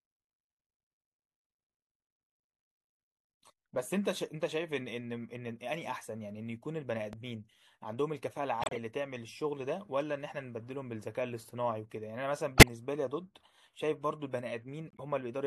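A voltage spike, likely from a switch or static discharge, adds a single loud pop at 7.13 to 7.16 s, roughly 10 dB above the speech, which continues underneath. Corrupt frame decoded: damaged compressed frames are played anyway, spraying energy at wrong frequencies as brief chirpy bursts at 8.62 to 8.78 s, 12.56 to 12.68 s (loudest) and 14.87 to 15.0 s (faint).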